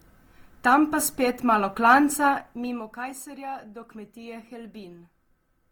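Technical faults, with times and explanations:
Throughout, generation loss: swirly, hollow speech with blurred attacks, likely from about seven repeated Opus encodes at 48 kbit/s, worse than one pass.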